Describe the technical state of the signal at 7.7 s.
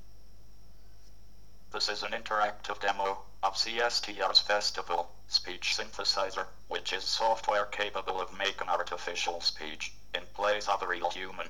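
At 7.7 s the signal is intact, with no audible fault at that moment.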